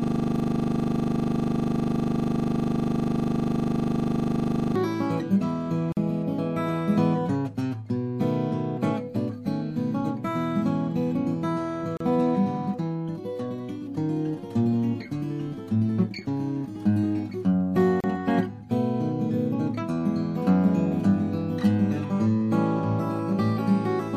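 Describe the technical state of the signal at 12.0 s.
At 12.0 s there is a gap at a join of encoded pieces: a silence of about 34 ms, from 11.97 to 12.00 s, cutting into otherwise continuous sound. The segments were compressed separately, so each carries its encoder's leading delay and last-frame padding, and these were left in when the pieces were butted together. Unlike a packet dropout, nothing is missing; the sound resumes exactly where it stopped, and the edges are softly smeared by the codec rather than clicking.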